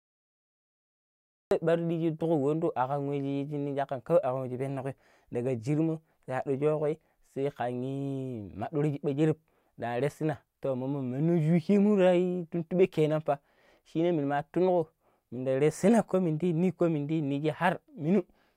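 The clip opens with digital silence from 0.00 to 1.51 s. At 1.51 s the speech begins abruptly, already partway through a sound. This is a cut-off start. Capture or streaming began late, so the opening of that sound was never recorded. There is no natural attack and no fade-in. The level jumps from nothing straight to full speech. The first sound arrives clipped at its front edge, as if the talker was interrupted mid-syllable.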